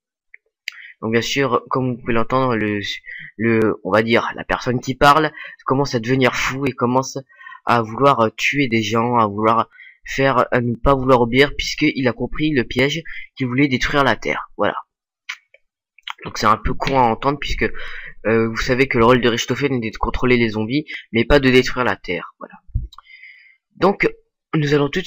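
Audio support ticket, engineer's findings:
Regular ticks, every 1.02 s from 0.57 s to 24.00 s, around twenty in all, audible only under signal. Periodic USB or driver dropouts: background task stalling the USB bus or audio driver, a few milliseconds of audio skipped each cycle.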